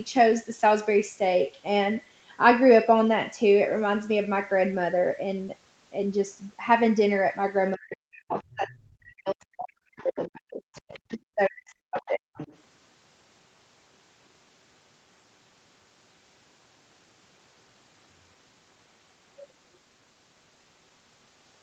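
Speech suppressed in double talk hits this speech recording between 7.76 and 12.39 s. For roughly four seconds in total, the voice dips by as much as around 40 dB, likely because an echo canceller confused it with loudspeaker echo while both sides talked. On the waveform this appears as a sagging, gappy envelope, and on the spectrogram as faded or missing harmonics. The other side's voice leaking through appears as faint foreign fragments at 8.37–8.54, 8.72–8.77, 10.00–10.04, 10.74–11.15 and 12.35–12.58 s, about 15 to 30 dB below the talker. It is likely residual loudspeaker echo the canceller left in, and shows as weak harmonic patches under a band that tops out at 8 kHz.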